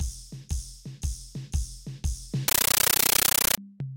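From 2.48 s to 3.58 s the music is replaced by harsh, chattering static. This is a compressed stream played as audio. Encoded Dolby Digital data has been treated as ordinary samples instead of being decoded. Each frame comes out as a burst of noise about 13.3 ms long, then silence from zero padding. The bursts repeat 31.25 times a second, giving a rapid rattle. The length of the bursts fits a 640 kbps AC-3 stream.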